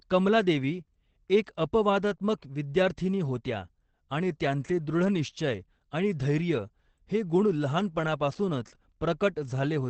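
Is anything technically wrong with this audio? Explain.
Yes. Opus voice compression runs throughout. The SILK coder cuts everything above about 8.4 kHz and coarsely codes the excitation, consistent with roughly 12 kbps, so the speech sounds muffled and hoarse.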